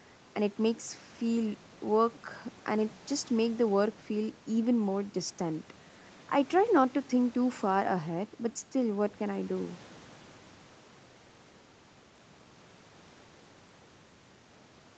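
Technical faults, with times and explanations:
Nothing stood out on listening to this speech recording.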